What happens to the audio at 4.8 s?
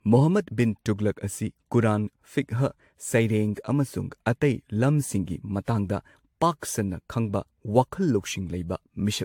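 At 4.8 s the speech carries generation loss, as it does throughout the clip. The sound is swirly and hollow, with a smeared, watery texture and softened consonant attacks, and nothing is present above 18.8 kHz. This is likely from repeated lossy re-encoding, around seven passes of an AAC-type codec at moderate bitrates. Each pass requantises on a shifted frame grid, so noise and spectral gaps accumulate beyond what one encode would leave.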